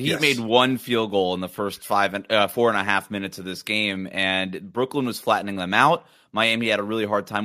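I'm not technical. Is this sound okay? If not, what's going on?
No. From 2.5 s, just after "first five and uh", to the end, the fault is a resampler restarted on every block. The audio was converted in separate chunks, which fits 100 ms pieces, and each seam leaves a small glitch: ticks ten times a second whenever there's speech.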